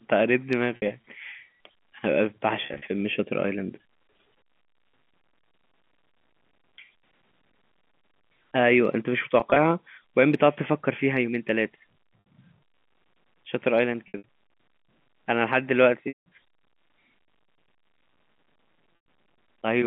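Packet loss with pitch repetition at 0.76, 2.66, 9.4, 12.2, 14.08, 16.08 and 18.96 s: the receiver fills lost packets by repeating the last pitch period, giving brief held, buzzy stretches over the G.711 telephone band, while the longer 180 ms loss at 16.08 s fades into silence before the speech returns.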